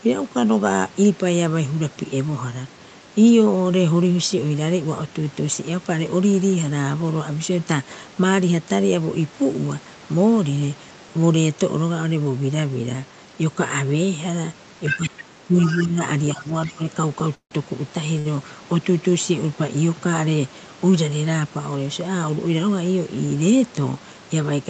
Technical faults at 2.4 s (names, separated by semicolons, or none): none